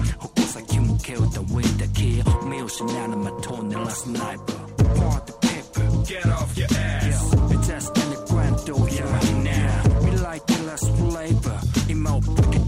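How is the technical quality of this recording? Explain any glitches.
The recording has one fault, present throughout. Sample clock jitter runs the whole length. The converter's clock wanders by a few microseconds, so samples land early or late. Steep, loud, bright passages suffer most. A faint hiss and roughness, around 35 dB down, rides on the sound and vanishes in silence.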